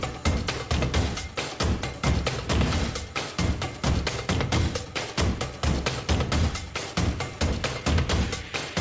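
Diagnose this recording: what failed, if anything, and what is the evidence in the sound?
The sender's clock runs around 5% faster than the receiver's, so the jitter buffer keeps overfilling and the receiver must discard audio, producing recurring small timing hiccups throughout.

Repeated timing corrections in the buffer stage trim short pieces from 0.20 s to 8.71 s, so the sound plays at about 103% speed, with uneven, slight skips.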